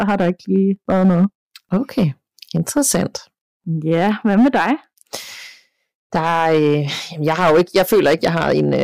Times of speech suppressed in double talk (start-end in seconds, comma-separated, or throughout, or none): none